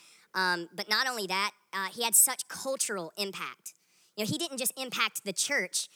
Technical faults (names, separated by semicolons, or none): wrong sample rate